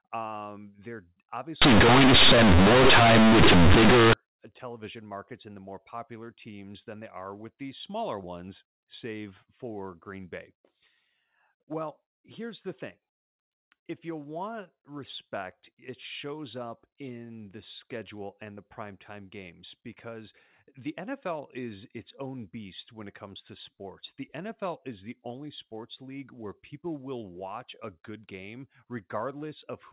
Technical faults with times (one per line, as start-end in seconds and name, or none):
1.62-4.13 companded audio read as linear